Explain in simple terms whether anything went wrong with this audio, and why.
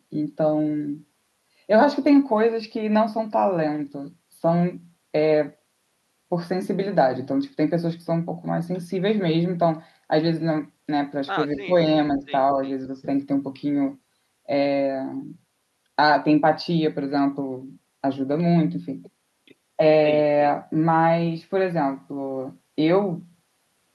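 Yes: the speech briefly dips at 11.55–11.71 s and 12.14–12.24 s, likely speech suppressed in double talk, a partial ducking rather than full silent dropouts.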